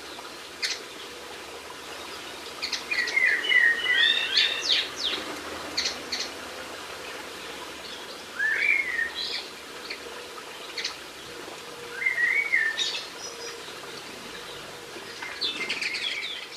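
From 1.86 s to 7.74 s a doubled audio track appears: a dry copy trails roughly 400 ms behind at about 5 dB lower, likely from a second, slower capture path.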